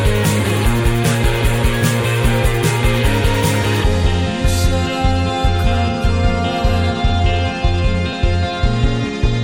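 At 1.24 s and again at 8.13 s the music jumps forward, with no gap of silence. Both are likely a dropped buffer (overrun): the samples weren't read out before the hardware overwrote them, so roughly 10 ms of audio vanished and the two edges were spliced together. A waveform shows a sudden discontinuity at each point, and a spectrogram shows a thin vertical broadband line.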